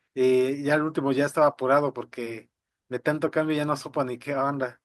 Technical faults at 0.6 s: none

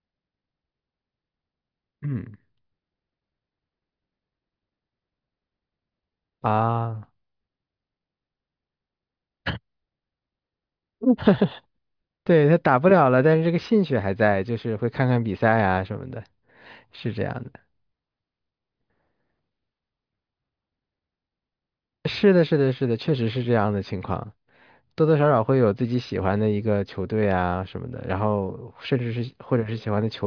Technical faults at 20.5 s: none

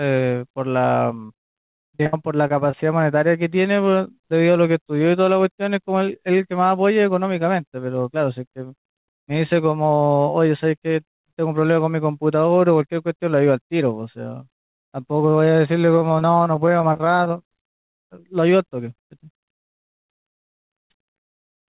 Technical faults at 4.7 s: none

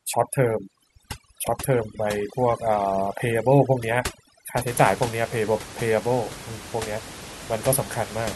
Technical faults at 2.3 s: overdone noise removal

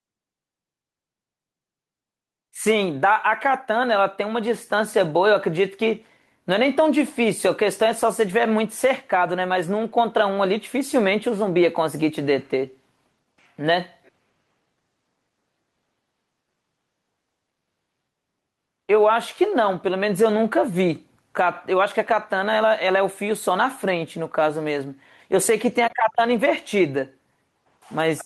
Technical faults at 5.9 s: gain pumping

